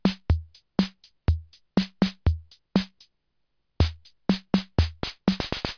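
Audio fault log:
No faults detected in this audio.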